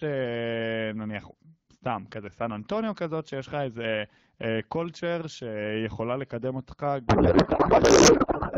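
A codec payload misread sets in at 7.07 s and runs to the end at 8.57 s in this speech recording. The sender packs AMR wideband frames in octet-aligned form, but the receiver unpacks them as bandwidth-efficient, so every field lands a few bits off. The decoder still gets plausible frames, and the speech turns into garbled noise and warble that barely tracks it. Before 7.07 s the HD Voice audio is clear, which fits a 12.65 kbit/s mode.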